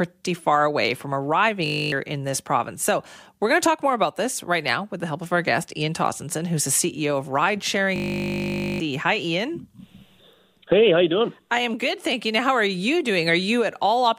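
Twice the computer or driver froze while the hardware kept replaying one 20 ms slice, a system hang loop. From 1.66 to 1.92 s, after "far away from", and from 7.96 to 8.8 s, speech becomes a steady 50 Hz buzz, losing roughly 0.3 s, then about a second.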